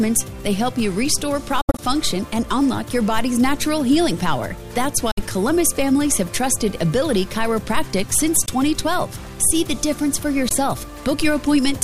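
Silent gaps cut the sound at 1.61 to 1.80 s, at 5.11 to 5.20 s, and briefly at 8.46 s and 10.49 s. The first gap is broken up, with the longest hole about 70 ms. These are likely Bluetooth dropouts: late packets were discarded, so the sound stops abruptly and then resumes further along.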